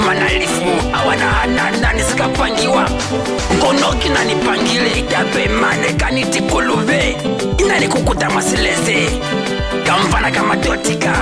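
No technical faults can be heard anywhere here.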